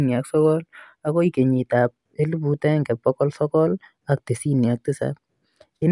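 No technical faults are audible.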